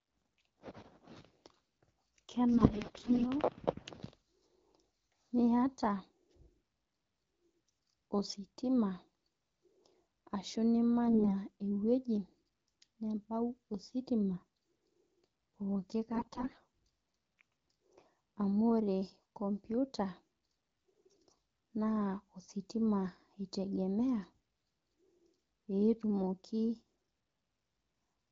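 AMR bit errors hit at 2.54–3.25 s, 11.08–11.36 s, 16.13–16.63 s and 20.89–21.26 s. Roughly 15 to 20 percent of the less protected bits arrive flipped, misplacing excitation pulses and skewing fine pitch, gain and spectral values. The speech keeps its pitch and level but turns hoarse, scratchy and gargly against the clear 12.65 kbit/s AMR-WB sound.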